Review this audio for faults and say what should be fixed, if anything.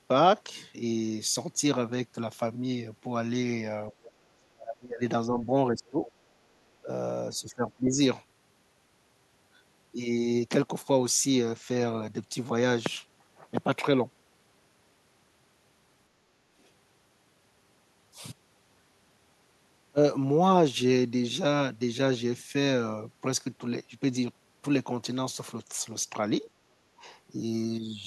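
Speech suppressed in double talk appears six times: 3.91–3.95 s, 4.35–6.08 s, 6.8–6.89 s, 7.31–8.0 s, 16.51–16.58 s and 26.85–27.04 s. The speech sinks by about 15 to 30 dB, deepest in the long 4.35–6.08 s stretch, then recovers. This is likely an echo canceller that, with both ends talking at once, couldn't tell near speech from loudspeaker echo and turned everything down. Unlike a network dropout, the level dips rather than cutting to silence or glitching. To prevent it, use a canceller with proper double-talk detection.

The other side's voice leaking through is heard once, at 4.03–4.11 s: a faint second voice about 25 dB below the main speech. This is likely residual loudspeaker pickup that the echo canceller failed to remove from the microphone. Unlike room reverberation, it is a separate voice, not a tail on the main speech. To prevent it, lower the loudspeaker volume or switch to a headset.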